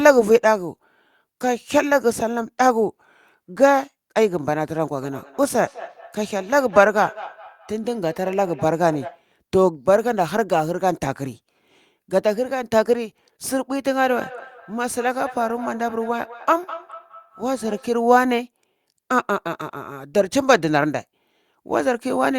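From 5.02 to 9.27 s and again from 14.05 to 17.98 s, the speech shows feedback echo between two devices: a second device replays the signal into the microphone, bypassing echo cancellation. Repeats return roughly every fifth of a second, peaking about 17 dB below the speech.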